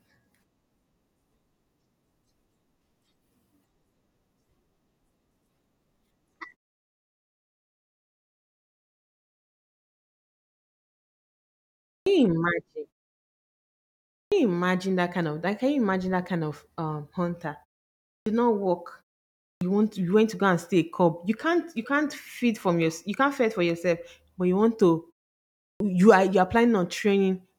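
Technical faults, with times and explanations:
11.90, 14.14, 18.10, 19.45 and 25.62 s: clipped start after a pause. The output path sleeps during silences of 0.5 to 5.4 s and needs 160 to 180 ms to wake, so each phrase bursts abruptly out of silence with its opening sounds missing.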